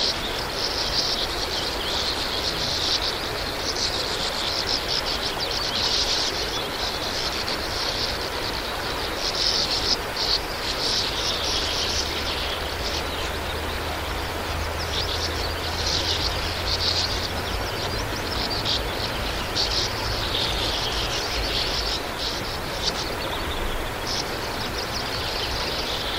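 Nothing stood out on listening to this recording of sounds.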